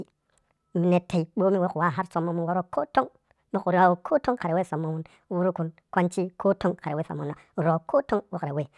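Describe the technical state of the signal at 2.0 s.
At 2.0 s, as throughout, a wrong sample rate plays the speech 1.5 times too fast, raising pitch about seven semitones, which fits 16 kHz audio played at 24 kHz.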